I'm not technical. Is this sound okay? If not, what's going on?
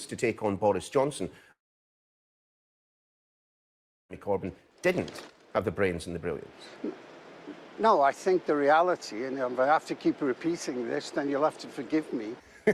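No. From about 1.51 to 4.11 seconds, the audio likely stopped arriving over the network for roughly 2.6 seconds, a long network dropout. The player briefly stretched out the last bit of sound, which fades almost at once, and then there is silence for nearly the whole gap. When the sound returns at about 4.11 seconds, it picks up later on, so everything from those missing seconds is gone for good rather than delayed.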